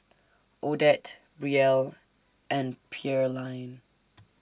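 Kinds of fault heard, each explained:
No fault can be heard anywhere in this speech clip. Nothing in the audio points to a technical problem at any point.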